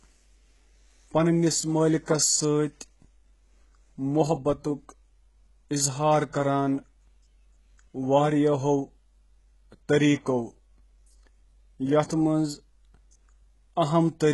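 Throughout the speech, the signal was likely squeezed through HE-AAC compression at a very low rate, around 12 kbps, so the treble above a low crossover is rebuilt from copied lower bands. Sibilants turn gritty and lispy, and nothing remains above 11.5 kHz.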